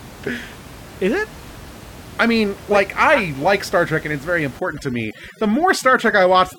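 A speech recording with room noise sitting about 20 dB below the voice until 4.59 s, when overdone noise removal takes hold through to the end at 6.58 s. Bands near the noise floor are gated away, leaving a lowered, broken-up background with twinkling specks; a spectrogram shows scattered isolated dots and ragged, hollowed harmonics.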